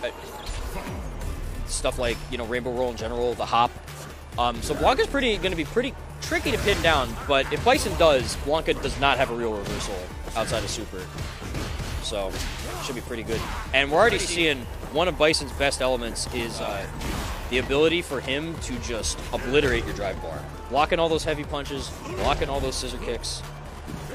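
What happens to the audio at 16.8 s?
Digital radio blending to analogue ends around 16.8 s. The receiver, which lost its digital stream at 14.07 s and cross-faded over about 0.38 s to the FM broadcast, blends back to digital by 16.85 s. Hiss roughly 30 dB below the signal disappears, and the level stays the same.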